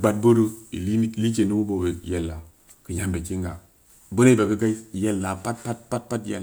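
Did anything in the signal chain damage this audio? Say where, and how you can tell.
No, nothing along the chain from capture to playback seems to have harmed this recording, so there's no stage to point at here.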